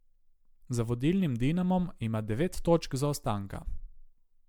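From start to finish, the speech has a swirly, smeared quality. It sounds hollow, with thin gaps in the spectrum. Consonant attacks are blurred. Nothing is present above 19.9 kHz. This is likely generation loss: the sound seems to have passed through a lossy MP3 encoder around seven times, at a 128 kbit/s setting. Each pass requantises on a shifted frame grid. The noise and holes pile up beyond what one encode would leave.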